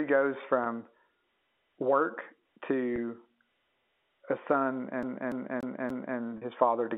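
At 0.64 s and again at 2.96 s the sound briefly freezes into a slightly held, buzzy tone lasting about 20 ms each time. This is packet loss with pitch repetition: audio data went missing, and the receiver filled the gap by replaying the most recent pitch period, fading it out. A 20 ms gap fits a single lost packet, which is short enough that the bridge stays as a buzz rather than sinking into silence.

From 5.03 s to 6.18 s the audio turns into a fast, even stutter. The same segment, about 0.29 s long, plays over and over, with a short mute at each jump, four repeats in all. That is the sound of a CD stuck on one turn: a scratch knocks the laser back one track at the same point on every revolution, so the same 0.29 s slice keeps returning.

At 6.38 s the buzzy hold returns, this time lasting about 40 ms, to about 6.42 s. It is another packet loss with pitch repetition. The doubled length points to two consecutive lost packets, which means the repeated pitch period has to stretch further. 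All of this sits within the narrow fixed-line band of G.711 telephone coding.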